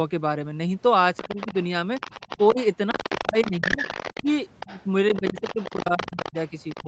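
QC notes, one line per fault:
1.17–6.88 s, other side's voice leaking through: A second voice runs beneath the talker from 1.17 s to the end, sitting roughly 15 dB below the main speech. The likely cause is the far end playing on the talker's loudspeaker and being picked up again by the microphone, with the echo canceller leaving part of it in place. Because that residue passes through the call's microphone path, which carries nothing above 8 kHz, it arrives band-limited, as a faint, persistent extra voice.
1.28–1.37 s and 2.38–6.87 s, speech suppressed in double talk: The talker's level drops while both sides are active. In the first span the dip is slight, about 5 dB over roughly 40 ms. In the second it is deeper, down by up to about 15 dB across roughly 1.5 s in total. This is likely the echo canceller failing to tell the talker from the loudspeaker echo and turning both down together. 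The talker's voice therefore sinks in patches while the other voice is present.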